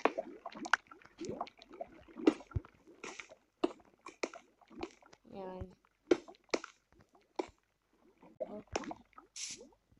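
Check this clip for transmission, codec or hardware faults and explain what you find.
One fault type occurs, three times. Damaged data in a compressed stream, at 2.33–2.36 s, 5.71–5.73 s and 8.32–8.41 s: corrupted frames make the decoder lose sync and hunt for the next header, producing brief chirps or squawks.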